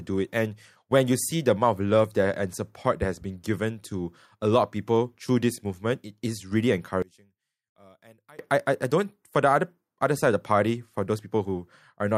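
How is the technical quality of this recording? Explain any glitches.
The recording has one clear fault. One channel inverted, 7.02 to 8.39 s: one stereo channel's polarity likely flipped, so the centred speech cancels when summed, dropping about 28 dB to a faint trace.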